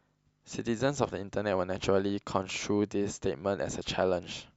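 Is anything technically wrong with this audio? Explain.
No, nothing technically wrong can be heard in this speech clip. Nothing in it points to a problem in how the audio was captured, processed or delivered.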